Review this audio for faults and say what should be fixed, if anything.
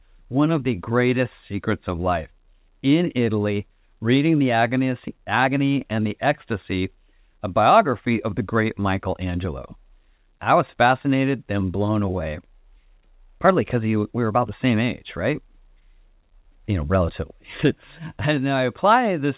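Nothing needs fixing: the speech sits within a band that stops at 4 kHz, consistent with A-law G.711 telephone coding at 8 kHz sampling, which is working as that format should.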